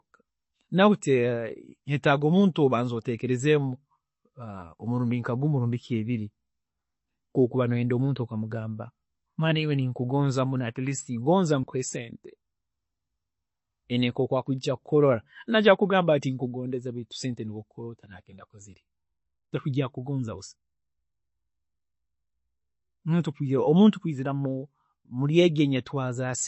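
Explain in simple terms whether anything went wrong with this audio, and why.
Something did go wrong, and it runs through the whole speech clip, from the first second to the last. The sound is dull and plainly watery, with nothing above about 8 kHz, so the crisp top end of s and t sounds is missing. That's the signature of MP3 compression, likely squeezed quite hard: the encoder runs short of data, chops off the treble, and lets quieter detail flicker in and out.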